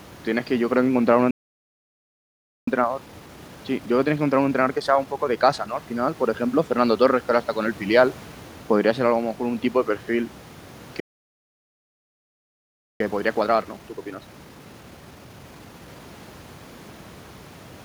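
At 1.31 s the speech cuts to silence for about 1.37 s, a playback stall, most likely the player running short of data or its output thread being blocked. It resumes at 2.68 s, and the same dead gap recurs from 11.00 s to 13.00 s, lasting 2 s.

After each stall a time-compressed catch-up follows for 3 s, from 2.68 s to 5.68 s at 1.15x and from 13.00 s to 16.00 s at 1.25x. Small segments are dropped and cross-faded to clear the backlog, so the speech sounds hurried at unchanged pitch. Room noise sits about 24 dB below the speech throughout.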